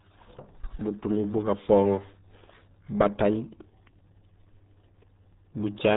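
Muffled, gargly speech throughout, with nothing audible above about 3.8 kHz and heavy codec damage, is the signature of the RealAudio 14.4 codec, an 8 kbit/s dial-up era scheme that discards the upper band and crushes detail to fit that tiny bitrate.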